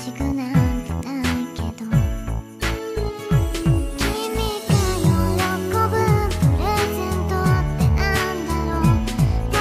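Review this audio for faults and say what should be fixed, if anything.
No technical faults can be heard anywhere in the audio. Nothing needs to be fixed.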